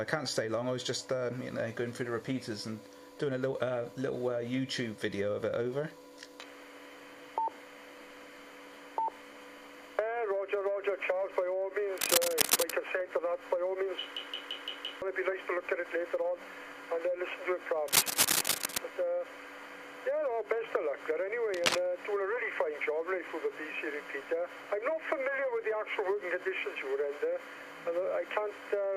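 From 11.95 to 12.72 s a burst of dense, uneven scratching and rustling sits over the sound, roughly 5 dB above the programme level. The same texture returns from 17.88 to 18.78 s and more briefly from 21.54 to 21.79 s. This is cable scratch noise, likely from a worn cable, connector or control being moved so that its contact resistance jumps about rapidly and injects irregular noise into the signal path.

Between 14.17 and 15.02 s there is a system hang loop. The host or driver stalled while the audio hardware kept replaying the same ring buffer, so a single 170.67 ms slice repeats exactly, five times, at about 5.86 Hz. The loop length fits an 8192-sample buffer. At that length the result is a mechanical, machine-gun stutter rather than a buzz. Around a second of real audio is lost under the repetition.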